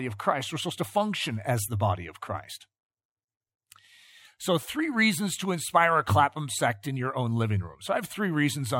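From 0.20 s to the end, faint ticks run under the speech about ten times a second. These are clock slip clicks. Two unsynchronised clocks likely drift apart by around 200 ppm, so single samples get dropped or repeated.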